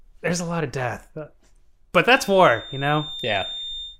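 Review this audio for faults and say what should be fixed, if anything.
From 2.0 s to the end there's a feedback whistle, a thin, steady tone near 3.6 kHz sitting roughly 15 dB under the speech and swelling and fading slowly in level. It's likely the speaker-to-mic loop hovering right at the edge of feedback, ringing at that frequency without taking off. To prevent it, pull the monitor gain down, keep the mic out of the loudspeaker's path, or notch out 3.6 kHz.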